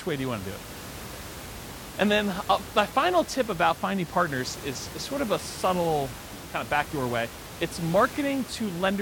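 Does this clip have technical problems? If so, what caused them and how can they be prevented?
No, this clip has no technical problems, so there is nothing that needs preventing.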